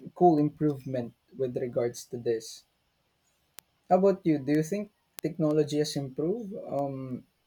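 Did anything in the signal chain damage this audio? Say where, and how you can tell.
Yes. Word clock ticks at the digital link into the converter: sharp clicks of uneven strength run through the speech from 0.38 s to 7.43 s, about every 0.3 s. The receiver is running on its own clock, which fits an error of around 70 ppm, so each slip drops or repeats one sample.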